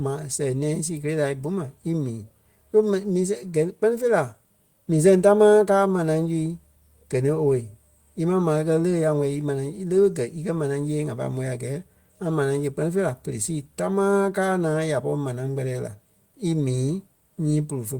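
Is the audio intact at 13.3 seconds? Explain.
Yes, at 13.3 seconds the speech is intact, with no audible dropout, click, distortion or other fault at that moment.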